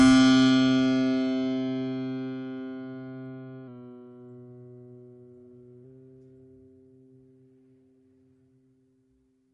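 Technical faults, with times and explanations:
Throughout, MP3 compression: the music has nothing above 11 kHz, so the top octave is missing and the sound is dull. The coding damage is plainly audible as a watery, swirling texture. This is likely from an MP3 encoder short of bits, consistent with a bitrate around 48 kbps, which removes the treble at a fixed cut-off and discards weak frequency lines that then flicker in and out between frames.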